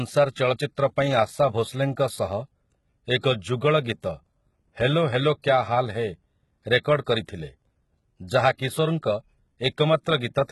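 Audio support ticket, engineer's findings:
HE-AAC compression, throughout: treble rebuilt from copied lower bands, gritty lispy sibilants, nothing above 11.8 kHz. Heavy damage likely from HE-AAC band replication at a low bitrate around 16 kbps.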